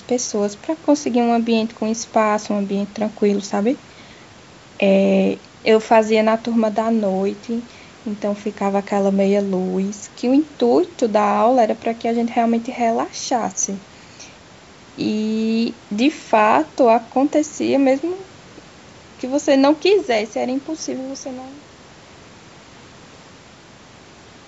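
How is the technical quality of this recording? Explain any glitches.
No glitches or technical faults can be heard here.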